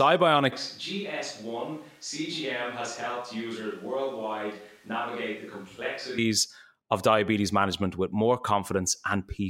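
At 0.53 s the speech abruptly turns roomy and hollow, loses bass and drops about 10 dB, with room noise around 30 dB below the speech, until an equally sudden return at 6.18 s. This is likely a switch to a distant microphone after the close one dropped out.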